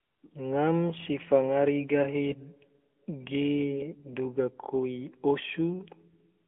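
Speech passed through the AMR narrowband mobile codec at a rate that fits roughly 10 kbps, squeezing it into a 200 Hz to 3.4 kHz band with plainly audible buzzy, synthetic coloration throughout.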